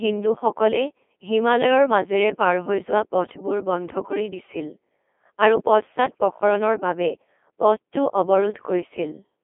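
Codec 2 vocoder damage runs through the whole clip, from start to finish. The speech has been rebuilt from pitch, voicing, energy and a coarse spectral envelope rather than carried as a waveform, so the decoder's sine-wave synthesis leaves it robotic and buzzy, with heavy damage throughout. The degree of damage points to a very low rate, around 2.4 kbit/s. The sound is confined to a narrow telephone-like band of roughly 250 Hz to 3.4 kHz, with nothing above 3.7 kHz.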